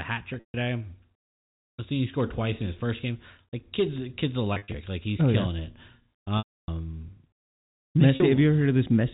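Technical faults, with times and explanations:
0.34–0.54 s, 4.54–4.74 s, 6.38–6.68 s and 8.16 s: packet loss with pitch repetition. The 40 ms gaps sound like a briefly held, buzzy tone. The 300 ms gap at 6.38 s fades to silence before a short cross-fade back. The receiver is looping the last pitch period to cover the missing audio, fading it out over about 50 ms.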